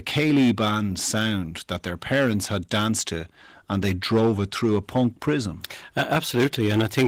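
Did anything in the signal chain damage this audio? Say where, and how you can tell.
Yes, hard clipping at the converter runs through the whole speech clip. The level is driven about 12 dB past full scale, so a few percent of samples hit the rail and get squared off. That shows as gritty fuzz on every loud syllable, and the light Opus compression on top doesn't mask it.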